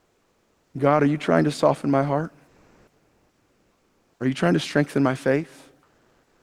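Comfort noise in place of the background from 2.47 to 4.09 s and again from 5.83 s to the end: in each pause the real background gives way to steady, featureless noise, shifting level by about 4 dB and then about 3 dB. The likely cause is discontinuous transmission in the sender, which fits Opus DTX.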